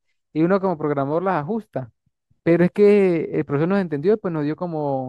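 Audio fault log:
0.13–5.07 s, clock slip clicks: faint, evenly spaced ticks run under the speech, one about every 70 ms, around a hundred in all. Each is a single sample dropped or repeated. The likely cause is two devices running on separate, unsynchronised clocks that differ by a few hundred parts per million, so a whole sample of error builds up at this steady rate.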